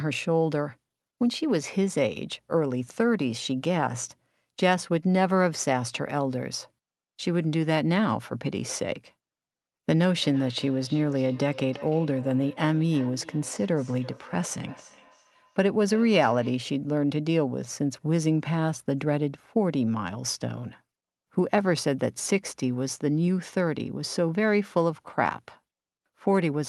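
Feedback echo between two devices runs from 10.21 to 16.7 s: a second device on the call replays this microphone's sound, which gets picked up again beyond the reach of either echo canceller. Each word returns around a third of a second later, about 20 dB below the speech, thinner and ringing.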